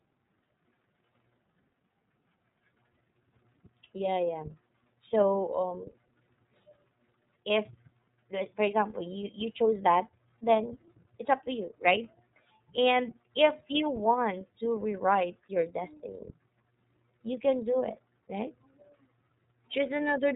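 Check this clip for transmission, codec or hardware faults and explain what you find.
One codec fault runs through the whole speech clip. iLBC codec damage is present from start to finish and plainly audible. The codec codes each frame's excitation independently, and the roughness fits 30 ms frames and the 13.33 kbps mode. Nothing above 3.8 kHz survives, so the speech sounds narrowband and muffled, without sibilant crispness. The limited excitation detail also gives the voiced sounds a slightly rough, synthetic, buzzy texture.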